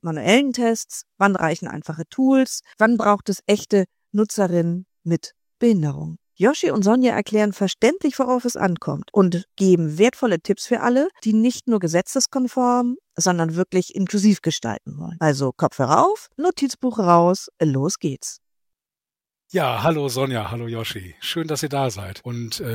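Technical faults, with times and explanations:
No technical faults can be heard anywhere here.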